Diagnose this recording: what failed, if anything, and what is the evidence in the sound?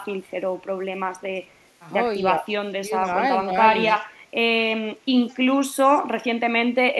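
The call-processing stage failed, and the clearest trace is speech suppressed in double talk. The talker's level sags from 2.78 to 2.92 s, by about 15 dB at its deepest, and again more briefly from 3.44 to 3.50 s, by about 10 dB. The likely cause is an echo canceller that could not tell the local talker apart from loudspeaker echo while both ends were active, so it attenuated everything and took the near-end speech down with the echo.

Echo leak also comes from call processing. A faint delayed copy of the speech surfaces at 3.03 to 3.13 s, 3.87 to 4.01 s and 5.28 to 5.37 s, each time trailing the original by 208 ms. It sits well below the speech, roughly 25 to 35 dB down, and is loudest in the 3.87 s instance. The likely cause is a far-end echo canceller that did not fully cancel what its microphone picked up from its loudspeaker, so short fragments of residual echo were returned down the line.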